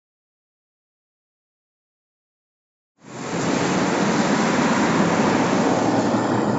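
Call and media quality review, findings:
Nothing stood out on listening to this sound clip, and no finding is raised against it.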